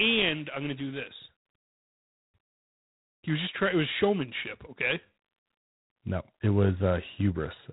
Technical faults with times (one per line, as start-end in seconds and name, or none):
0.00-7.73 G.726 ADPCM